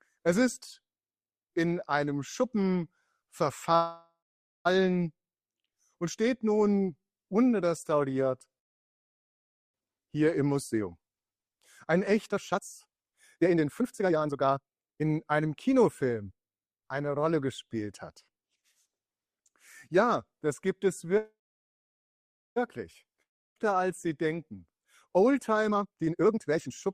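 At 3.75 s a call audio freeze begins, likely because packets stalled in transit and the jitter buffer ran dry. The receiver stretches the last sound into a fading buzz for about 0.9 s, the final half second of it silent, and the audio then resumes exactly where it paused, nothing lost, only delayed. A second freeze from 8.59 to 9.76 s likely has the same cause, and this time nearly all of its 1.15 s is silence.

From 10.73 to 16.38 s a jitter buffer speed-up follows. Too much audio has piled up in the buffer, so the receiver trims short pitch-period slices again and again, about two seconds in total, to bring the delay back down. The sound runs at about 136% speed with its pitch unchanged and comes across hurried.

A third call audio freeze at 21.17 s, again likely from a stalled buffer, runs to 22.58 s, roughly 1.2 s of it silent before the audio picks up without loss.

At 23.22 s comes a long network dropout, likely from a stretch of packets that never arrived. 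A brief fading fill gives way to silence by 23.58 s, and about 0.76 s of the audio is simply gone when playback returns, which cuts the delay by a few tenths of a second.

Two more jitter buffer speed-ups close the clip. From 24.71 to 25.17 s the removed slices add up to only a few hundredths of a second, so the sound runs about 8% fast and is barely rushed. From 25.71 to 26.88 s the buffer sheds roughly 0.7 s, and the sound races at about 168% speed, clearly hurried while its pitch holds steady.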